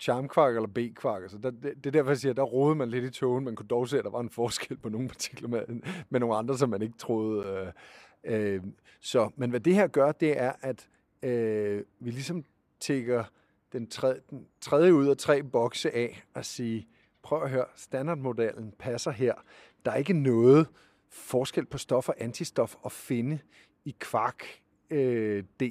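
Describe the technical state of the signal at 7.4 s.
At 7.43 s the speech drops into a block of digital silence lasting about 10 ms. The output buffer was likely not filled in time, so the sound cut out abruptly and returned without any fade, and the two hard edges produce a brief tick.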